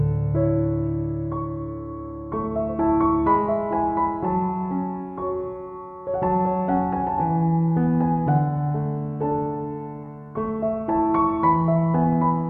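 A corrupt frame decoded at 10.04 s produces a brief blip. Flipped bits in a single compressed frame were not caught, and the decoder rebuilt it with wrong gains or misread codes, placing energy at wrong frequencies. The burst is quiet, peaking near -40 dBFS.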